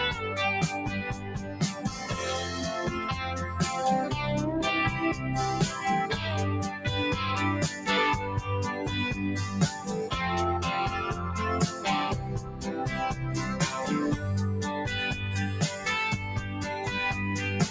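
Across the whole clip the level pumps and thins by roughly 5 dB as held sounds and tails sag while attacks stay intact. A speech-tuned noise suppressor was left running on non-speech sound, mistaking steady tones and decay for noise and pulling them down.

From 1.14 to 1.61 s, and again from 12.41 to 12.67 s, the sound sinks by up to about 7 dB. These are sounds cut by the noise suppressor, which judged them to be noise. The call microphone processing's band limit, with nothing above 8 kHz, is normal.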